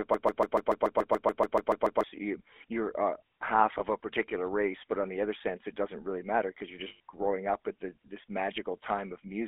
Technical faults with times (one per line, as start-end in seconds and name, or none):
0.00-9.48 GSM full-rate codec
0.00-2.04 broken-record loop
3.78-3.83 lost GSM frames
6.88-7.00 lost GSM frames